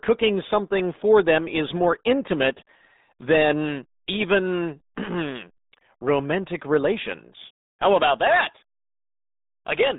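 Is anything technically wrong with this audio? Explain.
Yes. Throughout the clip the speech sounds muffled, boxy and gargly, with a watery, smeared texture on every syllable and nothing audible above about 3.8 kHz. This is the RealAudio 14.4 codec (RealAudio 1). The band is held to roughly 200 Hz to 3.7 kHz, and the coder rebuilds speech from a coarse model at a very low data rate, which fits an 8 kbit/s dial-up stream. That heavy compression causes the gargle and the loss of crisp consonants.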